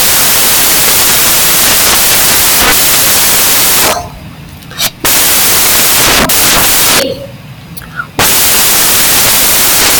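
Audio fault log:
Throughout: samples built from the wrong bytes. The reader is assembling each sample from mismatched bytes. It may be off by one byte, reading them in swapped order, or assuming the wrong alignment. This puts the rapidly fluctuating low-order bits of the speech into the most significant positions of every value. What should be speech is therefore replaced by loud, harsh broadband noise, close to white on the loud passages.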